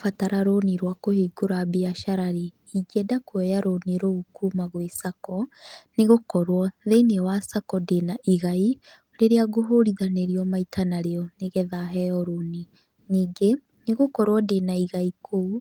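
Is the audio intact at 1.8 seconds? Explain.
Yes, the speech is intact at 1.8 seconds, with no dropout, click, distortion or other fault to be heard at that moment.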